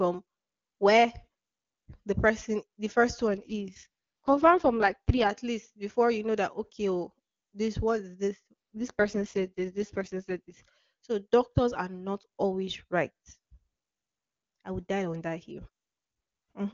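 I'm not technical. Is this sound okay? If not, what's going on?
No. Twice, from 3.28 to 5.30 s and from 8.75 to 10.54 s, there's an AMR rate drop. The phone network told the HD Voice codec to squeeze the speech into far fewer bits, so the voice turns rough and synthetic before clearing up again.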